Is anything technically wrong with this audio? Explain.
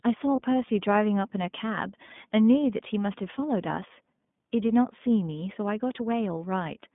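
Yes. The whole clip has passed through the iLBC codec, a narrowband VoIP coder that encodes each frame's excitation independently of the frame before it. Here the line passes only about 150 Hz to 3.6 kHz, so everything above that is gone, and the coding damage is plainly audible: the speech sounds thin, slightly rough and synthetic throughout. The frame behaviour fits the 20 ms, 15.2 kbps mode.

There are also lost iLBC frames, at about 0.36 to 0.40 s and again at about 2.06 to 2.09 s. Each gap points to a single 20 ms packet going missing. The decoder covered it by repeating the last pitch cycle blended with noise, so each dropout is heard as a brief held, faintly buzzy vowel-like smear. Because iLBC frames stand alone, the speech snaps back to normal immediately afterwards.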